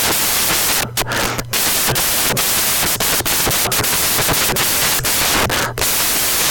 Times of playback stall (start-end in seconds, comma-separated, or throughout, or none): none